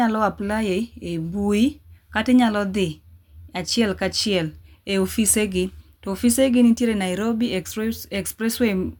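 No technical faults can be heard anywhere in this recording.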